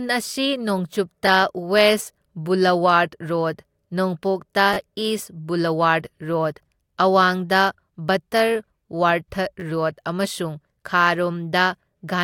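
At 1.27 s, 4.74 to 4.77 s and 9.60 to 9.62 s the speech catches on a repeated buffer: fresh audio arrived late, so the device replayed its last chunk, once, three times and twice respectively. Each repeat lasts about 10.7 ms, which fits a 512-sample buffer, so it is heard as a hard-edged click or brief buzz. Unlike a dropout, nothing goes silent and no audio goes missing; the same tiny slice simply sounds again.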